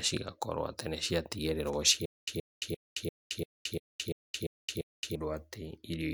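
From 2.06 s to 5.16 s the speech locks into a stutter with silent gaps: a clipped fragment about 124 ms long repeats nine times, each followed by roughly 220 ms of dead digital silence, so the burst returns every 344 ms at a steady, mechanical pace. This is likely a playback or stream stall, with each retry replaying the last buffered fragment before running dry, and the speech that belonged in that span is lost.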